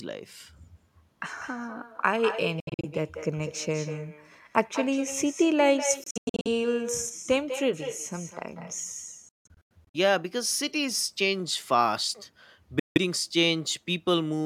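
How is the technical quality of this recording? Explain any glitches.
The quality is let down by two problems: a constant echo and a handful of short gaps in the speech.

The echo with no canceller runs the whole way through. Every phrase comes back around a fifth of a second later, about 10 dB quieter, sounding thinner than the original. That's the far end playing the call out loud and its microphone feeding it straight back down the line, with nothing in the chain stripping it out. So each word trails its own ghost.

Then there are four dropouts, likely a Bluetooth dropout each time, with packets not reaching the headphones in time. They fall at 2.6 to 2.85 s, 6.04 to 6.48 s, 9.29 to 9.96 s, and 12.79 to 12.98 s. The first three are choppy clusters of short holes rather than one clean gap. The worst, around 9.3 s, loses about 370 ms in total, including one silence of about 160 ms. The last is a single blank of roughly 160 ms. 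Each time, the speech picks up further along, as though it kept playing during the gap.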